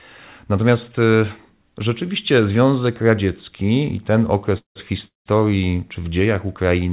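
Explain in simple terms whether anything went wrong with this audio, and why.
Two short call audio freezes interrupt the speech, from 4.58 to 4.77 s and again from 5.07 to 5.28 s. Each time, the sound stalls for about a fifth of a second, with a brief fading tail and then near silence, before the speech picks up exactly where it left off. Network packets were most likely held up on the way. Unlike a dropout, nothing is lost; the speech is just pushed later.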